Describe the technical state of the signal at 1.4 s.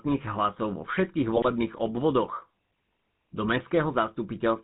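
At 1.4 s the signal is inside a burst of GSM bit errors running from 1.36 to 1.51 s, just after "hlasov vo všetkých". Corrupted bits are reaching the decoder and being read as wrong filter, pitch and gain values, so the spectrum bends and the level jumps frame by frame. The voice breaks into squawks, pops and gargling. A lost-packet gap would sound different: concealment there repeats or fades the last good sound smoothly, while here the decoder confidently plays garbage, with sudden level blowups.

Underneath, the whole clip carries the GSM full-rate codec, consistent with 13 kbps coding. It models the vocal tract and drives it with sparse, regularly spaced pulses, and nothing above 4 kHz survives. The damage is plainly audible as a buzzy, gravelly roughness. That grain is what separates it from a plain telephone band-limit, which would only sound dull, not rasping.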